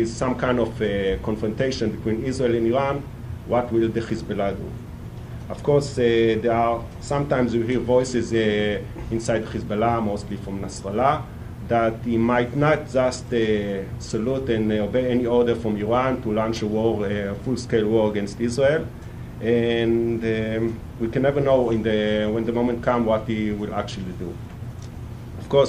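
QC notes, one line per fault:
No faults found; nothing to log.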